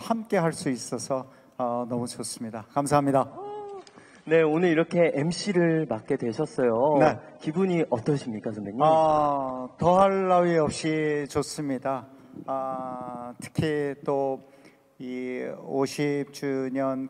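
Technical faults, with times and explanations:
3.27 to 11.27 s, adaptive stream at a lower bitrate: the top end suddenly goes dull, with nothing above 9.7 kHz, and a smeary, artefact-laden edge sits on the sound for those eight seconds. Full quality then snaps back with no gap. That's the player switching to a leaner version of the stream while the connection was slow. The cutoff and the artefacts fit an AAC stream dropping from around 96 to 32 kbit/s.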